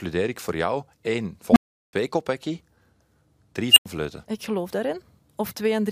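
At 1.51 s, right after "ik voor jou één", an unstable filter takes over the speech. A low tone around 200 Hz swells over about 52 ms to clipping, then the recursive filter's runaway output overflows and the sound drops to silence for about 370 ms until 1.93 s. The same fault recurs at 3.72 s as a high squeal near 3 kHz, building in about 48 ms and followed by roughly 93 ms of silence, ending at 3.86 s.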